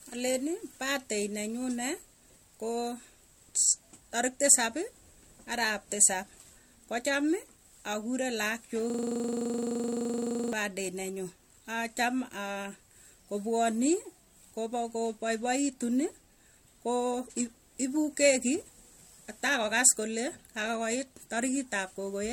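Throughout, the speech sounds swirly, hollow and smeared, with blurred attacks and nothing above 16.6 kHz. This is likely generation loss: the audio went through 64 kbit/s MP3 encoding about three times, each pass quantising on a shifted frame grid and compounding noise and spectral holes.

From 8.90 to 10.53 s, a 42.67 ms fragment repeats 38 times, producing a coarse buzzing stutter at 23.4 Hz. This is a system hang loop: the system froze while the audio hardware kept replaying its ring buffer, which fits a 2048-sample buffer.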